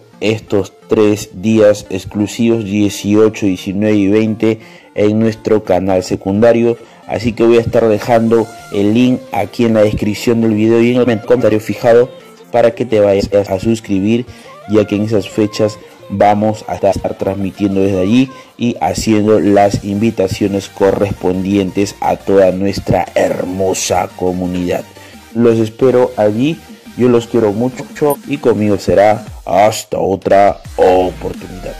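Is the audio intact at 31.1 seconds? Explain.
No. Hard clipping runs through the whole clip, including 31.1 s: the audio is driven about 7 dB past full scale, so roughly a small fraction of peaks are sliced flat, giving crackle on loud moments. The waveform shows squared-off tops; a spectrogram shows bright high-frequency streaks on those peaks.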